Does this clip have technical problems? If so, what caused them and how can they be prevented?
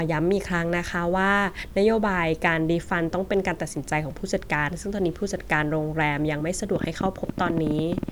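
Yes. From 6.76 to 8.10 s a train of clicks ticks over the speech, about 12.8 per second at uneven spacing, some twenty near-identical pulses peaking roughly 10 dB above the speech. Unlike random crackle, the clicks share one shape, which points likely to electrical interference or a faulty connection or power supply. Moving nearby equipment away and using a stable, well-grounded interface prevents it.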